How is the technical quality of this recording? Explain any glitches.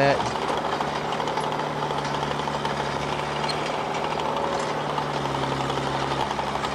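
The technical quality of this recording is sound, with no glitches to explain.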